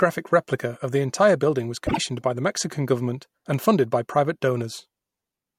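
Frames out of order at 1.87 to 1.99 s in this speech clip: two adjacent blocks were decoded in swapped sequence, so a brief stretch plays with its halves exchanged. The result is a garbled flutter. The swapped blocks fit single frames of about 24 ms, and no time is lost overall.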